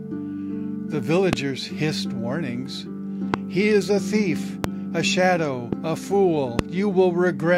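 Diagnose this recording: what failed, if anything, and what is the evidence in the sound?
Voltage spikes, likely from an intermittent contact in the analogue wiring, are injecting loud pops at 1.33, 3.34, 4.64, 5.73 and 6.59 s. Each sharp thump lasts about 22 ms and peaks roughly 20 dB above the sound (about 15 dB at 5.73 s), which continues underneath.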